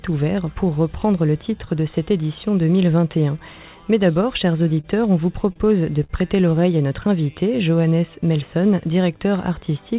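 Three short stalls from a late packet occur, at 4.81, 5.53 and 6.04 s. Each time the jitter buffer ran dry and the last sound was stretched for about 33, 29 and 55 ms before playback resumed at the same point. The result is a brief hold with a faint buzz or dip rather than a dropout, because nothing is skipped. The absence of any sound above 4 kHz fits the G.711 call path.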